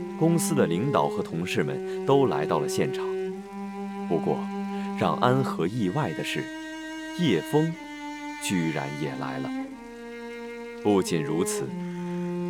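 Sample clock jitter runs through the whole clip. The converter's timing wanders, so each sample lands a little early or late. The spread is around two microseconds. That timing error turns into an amplitude error wherever the waveform moves fast. It sits roughly 40 dB below the sound. It comes across as a faint hiss or grain. The roughness swells on loud, bright passages and drops away when the sound goes quiet.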